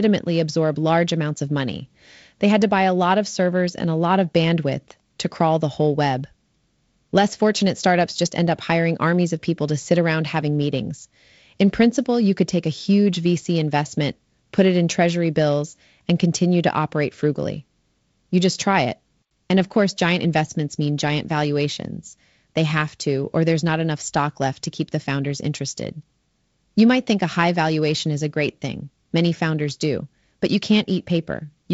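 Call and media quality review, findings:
No call or media quality findings: the speech comes through the G.722 wideband path at 48 kbit/s, with nothing above 7.7 kHz.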